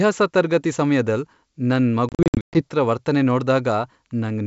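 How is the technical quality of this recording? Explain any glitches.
One clear glitch interrupts this G.722 wideband telephone recording. Packet loss on an ADPCM call, 2.09–2.61 s, just after "ತರ್ಗತಿ ಸಮ್ಯದಲ್ ನನ್": about 320 ms of hard silences over 460 ms, longest 120 ms. The decoder's predictor and step size drift from the sender's, so sound resumes slightly distorted.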